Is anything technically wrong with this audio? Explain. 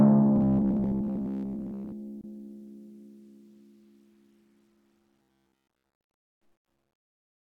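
Yes, there are two problems in this music clip.

From 0.36 to 1.94 s and again from 5.16 to 5.96 s it goes robotic, with a stiff metallic buzz at 66.8 Hz riding over the music. That's most likely repeated short buffers: audio arrived too slowly, so playback looped roughly 15 ms chunks, and most of the real material was skipped.

There's also a gap at a join of encoded pieces from 2.21 to 2.24 s, a dropout of about 27 ms. Separately encoded segments were stitched together with their encoder start delay and end padding still in, so a short silence interrupts the music and then it picks up where it stopped.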